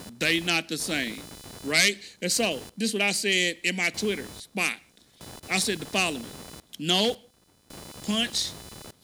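Computer activity noise throughout: load changes shift the shared ground, adding a chirping buzz pulsing near 500 Hz, well under the speech, seen as evenly spaced spectrogram stripes.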